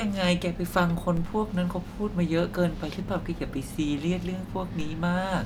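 At 1.17 s and again at 4.80 s, a DC step shifts the speech's zero line by about -26 dBFS. Each gives a low thump, then drains away slowly through a 2 Hz high-pass.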